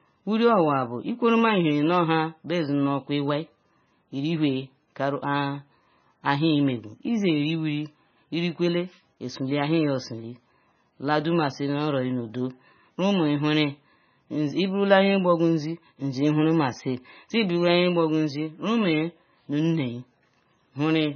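MP3 compression damage runs through the whole of this speech recording, likely from a starved encoder at a very low bitrate, which fits roughly 17 kbps. The treble stops dead at about 6.5 kHz, and weak frequency components flicker in and out between frames, leaving a heavily watery, swirling texture with smeared consonant onsets.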